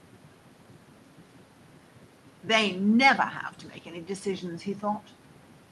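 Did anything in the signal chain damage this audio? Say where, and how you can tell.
No, nothing in this speech recording points to damage at any stage of the signal chain. Listening through, no single moment or stage stands out as having altered the sound.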